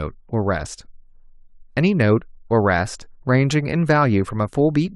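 Nothing is technically wrong with this speech recording.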